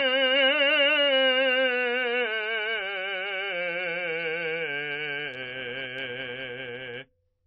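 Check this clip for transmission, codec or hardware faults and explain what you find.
A single fault runs through the whole music clip: transcoding between lossy codecs. The music was likely encoded at a very low MP3 rate, as if around 24 kbit/s, then re-encoded as AAC-LC at roughly 32 kbit/s. Nothing remains above 5.7 kHz, and artefacts from both codecs are heard together.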